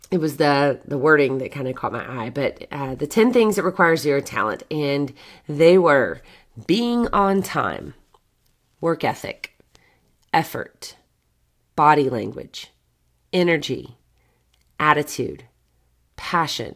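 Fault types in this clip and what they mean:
No technical faults are audible in the signal; the audio runs steady and intact throughout, with nothing breaking into it.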